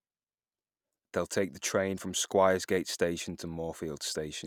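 No technical faults can be heard in this recording.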